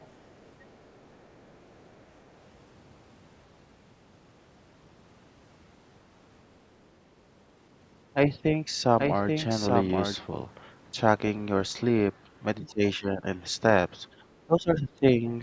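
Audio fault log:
0.00–0.07 s and 0.45–1.86 s, other side's voice leaking through: a faint second voice sits under the speech, a brief scrap at the very start and then a longer stretch of a bit over a second. It's well down, roughly 35 to 40 dB below the talker, so you have to listen for it. Most likely the far end was playing on a loudspeaker and the echo canceller didn't fully scrub it out of the mic feed.
8.99–10.15 s, doubled audio track: for about a second the speech is heard twice, with a second full-band copy trailing around 700 ms behind and only about 5 dB quieter. There's no reverb tail or room colour on it, and it cuts in and out abruptly, which points to a straight duplicate rather than a room echo. The likely cause is the same signal getting mixed in again through a slower capture path or an edit that left two copies out of step.
12.60–13.26 s, 14.14–14.27 s and 14.46–15.26 s, speech suppressed in double talk: the talker's level dips sharply in patches, by up to about 15 dB, for a few hundred milliseconds at a time, roughly 0.4 s, 0.15 s and 0.7 s across the three spots. 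That suggests both sides were talking at once, and the echo canceller likely couldn't tell the near talker from the loudspeaker echo, so it clamped down on everything. The call mic processing is visible in the spectrum, with nothing above 8 kHz.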